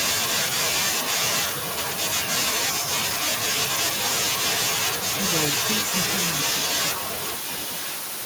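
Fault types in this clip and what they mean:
Echo leak: from about 6.96 s to the end, a delayed copy of the speech returns roughly 1.02 s behind the original, around 10 dB quieter. This is likely a far-end loudspeaker setup whose echo canceller failed to remove what its microphone picked up.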